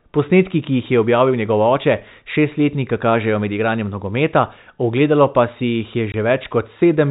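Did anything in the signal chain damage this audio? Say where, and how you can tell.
Yes. Packet loss filled with silence, at the network stage: a hard-edged 20 ms gap from 6.12 to 6.14 s, which fits one lost packet. A buffer underrun would repeat or stutter; here the receiver simply inserted silence.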